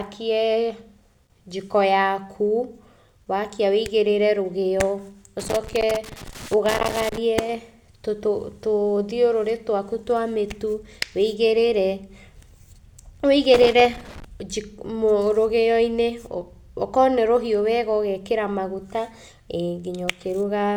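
From 5.39 to 7.18 s, and again from 13.54 to 14.25 s, the speech breaks into loose connector crackle: a worn or dirty contact keeps making and losing connection, chopping the signal. It sounds like ragged, uneven scratching in irregular bursts. Digital dropouts or clicks are cleaner and more evenly spaced, and surface noise runs throughout. This crackle arrives in erratic clusters confined to those two stretches.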